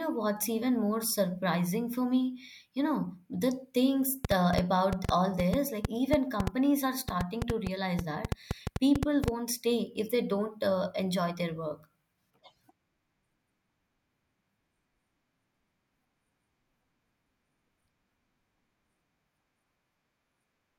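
From 4.25 s to 9.29 s the speech carries a train of clicks: around thirty near-identical pulses at roughly 5.4 per second, unevenly spaced, poking well above the signal and ticking on through pauses. Their matching shape, unlike random crackle, points to likely electrical interference.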